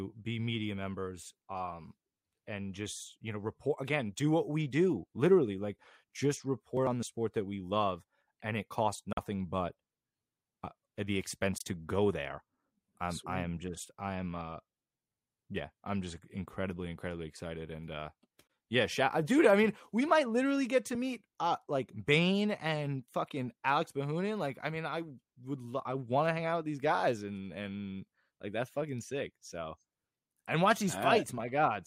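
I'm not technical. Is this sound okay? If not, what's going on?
No. Speech cuts to silence three times, likely a Bluetooth dropout: at 9.13 s after "love and it costs" (43 ms), at 11.58 s after "uh the" and at 18.47 s before "yeah shout uh dude" (21 ms each). Unlike a stall, speech resumes further along rather than where it stopped.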